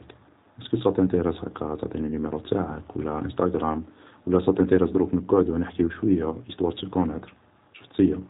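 Speech sounds rough and faintly synthetic throughout, with nothing above 3.8 kHz: G.729 coding, which rebuilds the voice from a compact model at a rate that fits 8 kbit/s.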